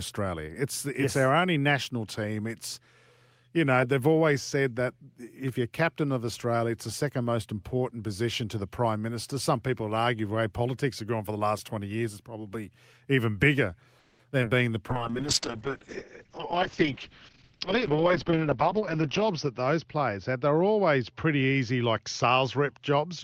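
Speech, heard through a call path, carries four kinds of fault clustered after "is probably even bigger". From 13.99 to 14.21 s there is a call audio freeze: the last sound is stretched into a fading buzz for about 200 ms, likely because packets stalled and the jitter buffer ran dry. Nothing is lost, and the sound resumes exactly where it stopped, so it is heard as an inserted pause rather than a dropout. Two short concealed packet losses follow at 14.31–14.34 s and 14.42–14.45 s. Each is a quick smear of about 30 ms where roughly 20 to 40 ms of real audio is gone and patched over, unlike the freeze, which skipped nothing. From 14.91 s to the end a call bitrate drop takes the stream from 32 to 6 kbps, holding its lowest rate for about 4 s. The bandwidth narrows from 20 kHz to 6 kHz, giving a muffled, gritty tone that stays until the end, unlike a single glitch. Within that stretch a jitter buffer speed-up plays 16.25–16.82 s at about 109% and 17.33–18.81 s at about 108%, trimming roughly 70 ms and 150 ms. 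The sound hurries with its pitch unchanged, so it is not a tape-style speed change.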